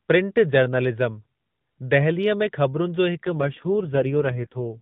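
From 3.23 s, an AMR rate drop starves the speech of bits, so it turns buzzier and more synthetic through to the end, consistent with about 4.75 kbps.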